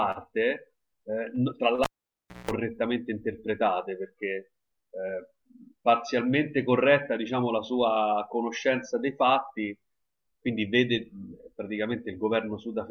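At 1.84 s the speech cuts out with a pop as a live cable is pulled and plugged in again. About 625 ms of near silence follows, including roughly 185 ms of 60 Hz mains buzz as the tip makes partial contact, and a second pop at 2.51 s.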